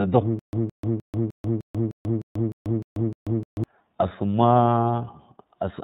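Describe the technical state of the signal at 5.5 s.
At 5.5 s the speech carries iLBC codec damage, present across the whole clip rather than at that moment alone. This narrowband coder rebuilds each frame's excitation independently, and the plainly audible roughness fits 30 ms frames at around 13 kbps. The speech sounds slightly buzzy and synthetic. On a spectrogram the energy stops at a hard ceiling near 4 kHz with nothing above, and harmonics look smeared and blocky from frame to frame.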